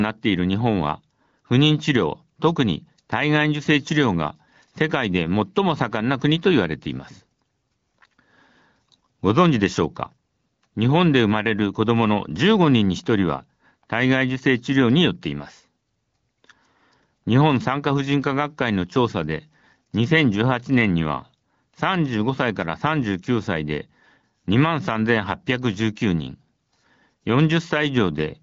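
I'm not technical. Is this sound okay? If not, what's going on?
Yes, this sound is okay, and nothing is going wrong in it.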